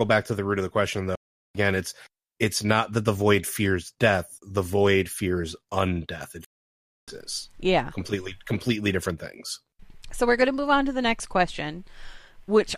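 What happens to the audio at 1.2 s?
A stream reconnect occurs from 1.15 to 1.57 s. After "root of the question" the connection breaks and the player falls silent for 0.39 s, then reconnects with a fresh decoder. Speech resumes at "it's it's not that", roughly a fifth of a second further on.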